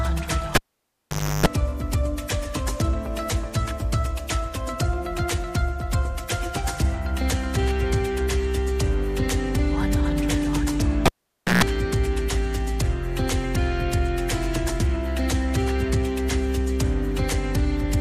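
At 0.55 s a cable is pulled and plugged in. A pop cuts the sound, then near silence holds for about 859 ms. While only the plug tip makes contact, a 50 Hz mains buzz bursts through for about 324 ms. A second pop brings the audio back at 1.46 s. The same fault recurs from 11.06 s to 11.64 s. This time the gap lasts about 529 ms, with a 141 ms buzz at 60 Hz.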